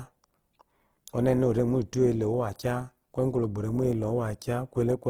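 From start to finish the speech sounds rough and grainy, with a noisy, granular texture that is plainly audible. The top end stays open, reaching to about 20.2 kHz, so the damage is texture, not muffling. This is likely Opus compression in its CELT music mode, at a rate low enough, around 16 kbps, that starved bands are filled with folded or noise-like content instead of being left empty.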